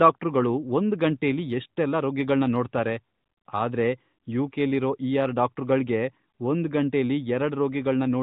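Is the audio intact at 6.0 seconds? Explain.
Yes, the audio is intact at 6.0 seconds, with nothing breaking up, dropping out or distorting the speech at that point beyond the narrow, band-limited sound of the AMR narrowband mobile codec carrying it.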